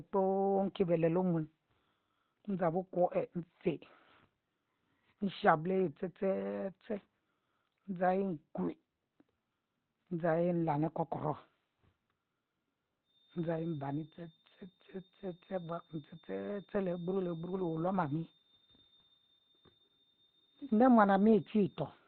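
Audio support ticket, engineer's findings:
Opus compression, throughout: muffled, hoarse speech, nothing above 4.2 kHz. Likely Opus dropped into its narrowband SILK speech mode, consistent with a rate near 12 kbps, with heavy codec damage.

Feedback whistle, 13.02 s to end: steady 4.4 kHz tone about 10 dB under the speech, swelling and fading slowly. Likely a speaker-to-mic loop held just below runaway gain.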